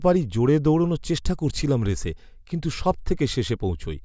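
No technical faults are audible anywhere in this speech.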